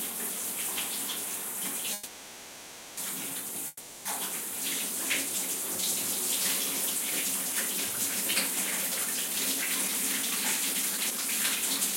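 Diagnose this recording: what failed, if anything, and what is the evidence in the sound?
Call audio freeze at 1.93 to 2.99 s, a network and jitter-buffer fault. The last sound is stretched into a fading buzz for about 1.04 s, then resumes exactly where it stopped, with nothing lost. The receiver was likely starved by delayed packets and added that delay.

Long network dropout at 3.67 to 4.07 s, in the network stage. The sound smears into a decaying fill for about 0.38 s, ending in a brief silence, then comes back further on. That stretch is missing, which points likely to packets that never arrived.

Jitter buffer speed-up at 10.74 to 11.19 s, in the receiver's buffer management. The audio runs at 119% speed with unchanged pitch, sounding hurried, as about a tenth of a second of short pitch-period pieces is cut out to shrink the delay that built up earlier.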